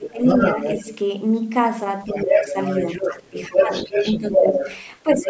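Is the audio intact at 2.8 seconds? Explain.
No: other side's voice leaking through runs from 2.08 to 3.11 s, a second voice about as loud as the main speech, likely loudspeaker echo the canceller missed.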